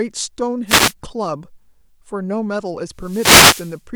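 At 0.66 s the speech is briefly hit by a wireless microphone noise hit lasting about 0.28 s, and a longer one follows from 2.94 to 3.82 s. Each time, the FM radio link fades, so receiver hiss surges into a swish of static. On a spectrogram these appear as broadband vertical bands of noise filling the whole frequency range; the waveform shows a fuzzy, dense layer of noise over the speech envelope.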